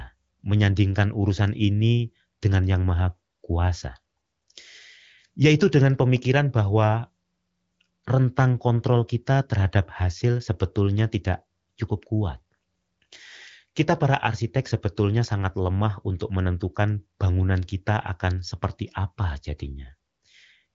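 No technical faults are audible.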